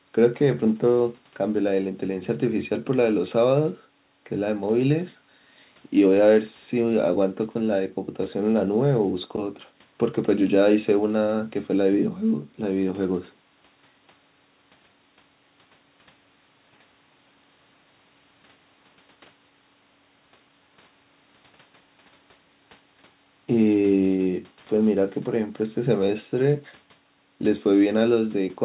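No technical faults turn up anywhere in this speech to describe in time order.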